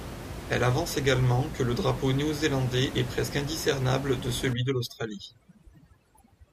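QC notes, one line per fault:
4.53–6.52 s, overdone noise removal: right after "est presque indiscernable de" the denoiser clamps down hard on the room noise, which sits only about 11 dB under the speech, gating bands near its noise estimate so the background twinkles and quiet parts of the speech drop out with it.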